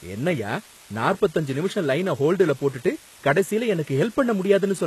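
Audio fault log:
throughout, low bit depth with dither: a steady, even hiss sits around 25 dB below the speech with no distortion, which fits about 7-bit resolution with dither added before rounding.
throughout, HE-AAC compression: nothing reaches above 12.3 kHz, and the treble sounds copied upward from lower bands, making s sounds gritty and lispy; likely HE-AAC near 16 kbps.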